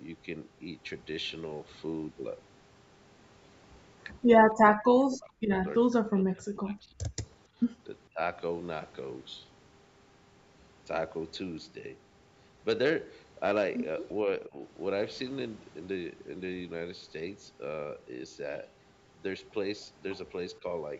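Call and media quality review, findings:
Speech suppressed in double talk: speech level collapses at 4.71–5.67 s, 5.88–7.25 s and 8.06–8.20 s (deepest, near 40 dB), with shallower dips at 14.47–14.60 s (about 15 dB) and 20.58–20.64 s (about 10 dB). Likely the echo canceller's suppressor clamping the near-end talker while far-end audio was active. The talker itself fades or breaks up over stretches of a second or more, not just the room behind it.

Background gated by the echo canceller: room tone briefly ducked at 7.53–7.59 s, about 22 dB down, then restored. Residual-echo suppression closed the microphone path while the loudspeaker played. The noise floor dips in one short notch. Band limit at 8 kHz and low-bass roll-off from the call microphone chain are expected.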